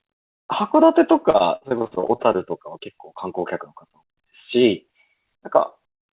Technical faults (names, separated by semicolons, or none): repeated packet loss (robotic sound)